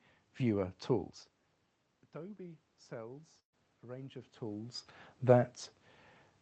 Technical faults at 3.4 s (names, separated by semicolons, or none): automatic gain rising; burst of packet loss